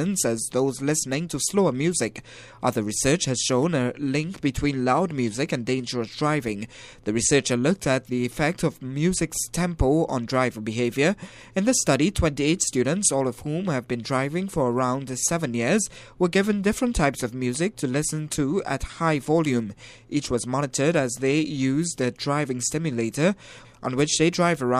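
Nothing stood out as a technical problem on listening to this audio.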